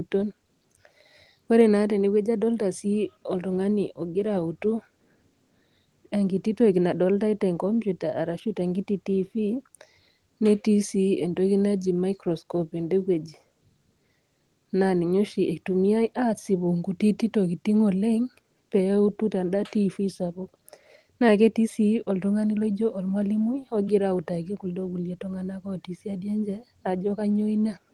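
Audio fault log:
The speech comes through a WebRTC call path encoded with Opus at 40 kbps, its audio band extending to 12 kHz, and the signal carries nothing beyond what that path ordinarily delivers.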